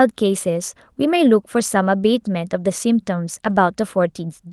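A lost packet rebuilt from error correction appears at 1.59 to 1.61 s, and again from 3.45 to 3.55 s. Both times the speech carries on without a gap, but those stretches turn rougher and noisier. The missing audio was filled from a low-bitrate copy carried in the following packet. The first repair spans 20 ms, about one packet's worth; the second spans 60 ms, pointing to three separate packets. Both are heard within an Opus call band extending to 12 kHz.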